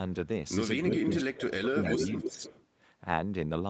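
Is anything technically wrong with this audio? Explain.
Yes. Two faults of a loudspeaker call path can be heard in this speech.

Echo leak, from 0.84 to 1.23 s and again from 1.76 to 2.66 s: the far end's echo canceller likely let through part of what its microphone picked up from its loudspeaker, and that residue was sent back. A copy of the speech arrives about 308 to 310 ms late. In the first stretch it is roughly as loud as the direct speech. In the second it is a little quieter.

Speech suppressed in double talk, at 0.97 to 1.07 s, 1.24 to 1.99 s and 2.18 to 2.41 s: with both ends active at once, the echo canceller likely could not tell its own talker from the returning echo and turned everything down. The speech sinks sharply in the first two stretches, where it is cut deeply for about 100 ms and then for roughly half a second. The third stretch has a shallower dip of about 200 ms.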